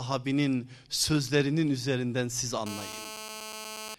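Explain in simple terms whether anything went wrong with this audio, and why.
A nearby 2G mobile phone on a call sent radio bursts about 217 times a second, and the audio circuit picked them up. This GSM phone buzz is a harsh, raspy drone from 2.66 to 3.95 s, right after "sözlerinin üzerinden siz", sitting over the speech.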